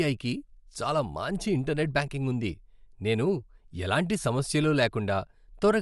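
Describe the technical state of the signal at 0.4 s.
At 0.4 s the speech carries the same coding damage heard across the whole clip, likely Bluetooth LC3 compression. Nothing reaches above about 11.6 kHz, and the upper band that remains has a breathy, grainy sheen where the encoder has dropped fine spectral detail and filled the gaps with shaped noise. The damage is plainly audible, and its character fits a 10 ms frame at around 48 kbps. What separates it from a simple low-pass filter is that grainy noise-fill texture rather than a clean, dull cutoff.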